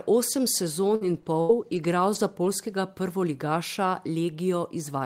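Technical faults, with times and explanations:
0.87–2.47 s, repeated packet loss (robotic sound): three short gaps, up to 80 ms, patched by stretching prior speech, so it turns choppy rather than falling silent once.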